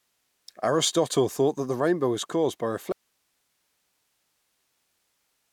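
At 2.92 s, right after "rainbow was caused by", the speech cuts out abruptly. This is an audio dropout to a faint residue. It never recovers and runs to the end of the clip. The gap is not silent. It holds a thin hiss, roughly 50 dB below the speech level. The likely cause is the wanted signal being lost upstream while the path after the break stayed live, passing only its own noise.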